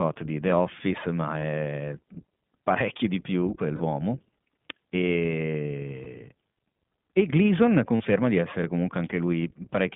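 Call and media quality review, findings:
iLBC codec, whole clip. Narrowband VoIP path coding each frame's excitation on its own. Speech band limited to about 150 Hz–3.6 kHz, nothing above. Rough, slightly synthetic grain plainly audible on all speech, consistent with the 15.2 kbps mode and 20 ms frames. Dull, boxy top end from the band limit. Component: codec stage of the call leg.

Lost iLBC frames, four dropouts. Packet loss with decoder concealment repeating the last pitch cycle plus noise, heard as a brief held buzzy vowel:
1.40–1.43 s, one frame's worth, about 20 ms.
3.76–3.82 s, right after "parecchio di più", about 40 ms, two frames.
6.04–6.07 s, about 20 ms.
7.96–8.01 s, just before "di essere", about 40 ms.
Clean recovery immediately after each. Component: network transport.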